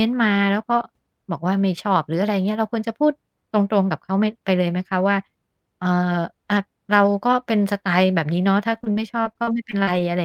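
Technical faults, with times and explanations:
8.73–10.01 s, repeated packet loss (robotic sound): the speech turns choppy, with nine short holes close together and the longest about 42 ms. Audio went missing again and again across this stretch, about 220 ms in all. Each hole was patched by stretching out the sound just before it, so about 200 ms of the speech is rebuilt rather than real, roughly 17% of the span. That repeated patching gives the broken, choppy texture.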